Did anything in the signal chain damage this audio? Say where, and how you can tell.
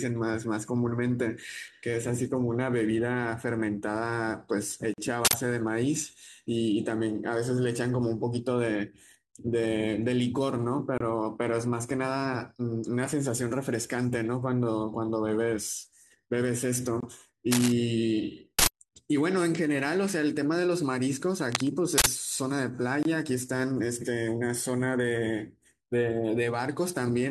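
Yes, at three separate stages.

At the codec and storage stage there are gaps at a join of encoded pieces. The speech drops out abruptly at 4.94 s for about 43 ms, then at 10.98 s, 17.00 s and 23.03 s for 24 ms each, and resumes exactly where it stopped. The six-second spacing points to the audio being encoded in six-second pieces and concatenated without trimming, so each piece's encoder start delay and final-frame padding stay in as silence.

At the driver or buffer stage, an uninitialised buffer shows up three times, at 5.25 s, 18.59 s and 21.98 s. Each is a short, loud burst of digital noise lasting about 85 ms. That fixed length fits a 4096-sample block at 48 kHz. Playback handed that block to the output before any audio had been written into it, so whatever was left in memory was reproduced as samples.

In the analogue wiring there is cable scratch noise. From 17.51 s to 17.72 s, dense, uneven scratching sits over the speech at roughly the same level. 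A second episode from 21.51 s to 21.69 s is a little quieter than the speech. The likely cause is a worn cable, connector or control being moved, with its contact resistance fluctuating rapidly and adding those irregular noise bursts to the signal.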